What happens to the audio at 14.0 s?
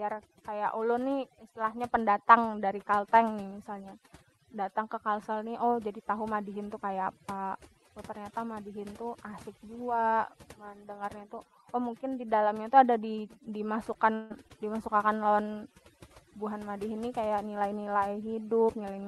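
Just before 14.0 s, from 13.93 to 13.97 s, there is a short concealed packet loss. About 20 ms of the Opus stream did not arrive in time, and the decoder covered the gap by extending the preceding sound, carrying on its pitch or shaped noise, before crossfading back into the real signal. The result is a brief smear or wobble of around 30 ms, and any short consonant landing in that window can drop out.

Under this moment, as throughout the clip, there is overdone noise removal. The suppressor is cutting individual frequency bands whenever they sit close to its noise estimate, so low-level parts of the speech are removed along with the noise. The background drops and breaks up into twinkling, warbling specks.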